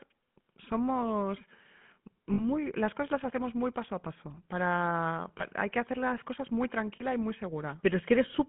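The whole clip carries the sound of the GSM full-rate codec. The speech is confined to a telephone band of roughly 150 Hz to 3.4 kHz, with nothing above it. Its clearly audible buzzy, gravelly texture comes from the codec rebuilding the voice from a vocal-tract model excited by a regularly spaced pulse train, a scheme consistent with the 13 kbps full-rate coder.

Lost GSM frames interrupt the speech three times. From 2.34 to 2.42 s, just before "las cosas las hacemos", the decoder stops receiving valid data for about 40 ms, which fits two 20 ms frames. It fills the gap by repeating the last good frame's parameters, producing a short rough, metallic ring. The same thing happens at 5.38 to 5.43 s, ahead of "hay que hacer las", for about 20 ms, a single frame's worth. It happens again at 6.96 to 7.03 s, between "hacer las cosas muy" and "y muy", for about 40 ms. Each gap is too short for the repeated sound to fade to silence.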